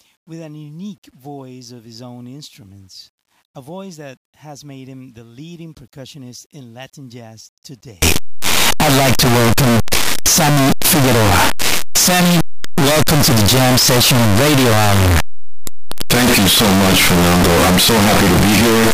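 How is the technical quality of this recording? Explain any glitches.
The recording degrades badly partway through. From 8.02 s to the end at 18.93 s, the speech turns into very loud, harsh distortion, and the quiet stretches become as loud as everything else. The likely cause is the signed and unsigned mix-up, with 8-bit samples read in the wrong format. That flips the top bit, so every zero crossing becomes a jump across the full range. On a waveform this section looks like a solid, dense block. A spectrogram shows dense broadband energy from the lowest frequencies up through several kHz.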